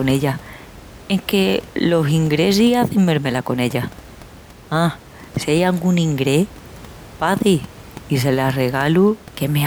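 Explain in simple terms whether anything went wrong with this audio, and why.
Nothing went wrong with this speech recording: the signal stays steady and intact throughout, and the faint background noise is just the normal room noise around the microphone, sitting well below the talking.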